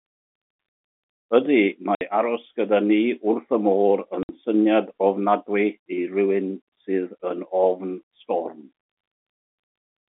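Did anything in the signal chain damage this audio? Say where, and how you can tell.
Yes, the network stage: packet loss filled with silence. The speech drops out dead for 60 ms at 1.95 to 2.01 s and again at 4.23 to 4.29 s, with hard edges. That fits two 30 ms packets lost each time and filled with silence at the receiver, under the normal narrowband G.711 telephone sound.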